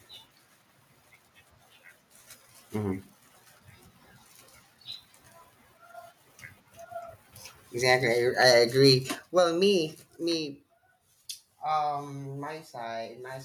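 Microphone overload hits this speech recording at 7.89 to 7.95 s, 8.41 to 8.57 s and 8.84 to 8.94 s. The loudest peaks are flattened with a harsh, crackling edge, running about 3 dB, 3 dB and 2 dB past the converter's limit, with a small fraction of samples clipped, roughly one to a few percent. The likely cause is an input gain set so high that the converter ran out of headroom. Microphone volume stepped down at 8.13 s, 9.15 s and 10.17 s: the speech and the background fall together in single abrupt steps of about 3 dB, 6 dB and 3 dB. The first two drops come right after the distorted bursts, which points to the call software likely detecting the overload and pulling the device's input volume down one notch at a time.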